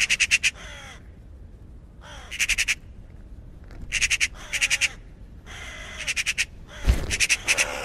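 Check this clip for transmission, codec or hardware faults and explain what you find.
Nothing in this clip points to a transmission, codec or hardware problem.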